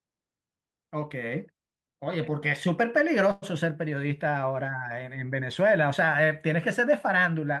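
A call audio freeze occurs from 3.31 to 3.45 s. The last sound is stretched into a brief buzzy, hiss-like continuation lasting about 106 ms, with no silence. The speech then picks up exactly where it left off, so nothing is lost, but everything after runs 106 ms later. The likely cause is packets held up in transit, leaving the jitter buffer empty until they arrived.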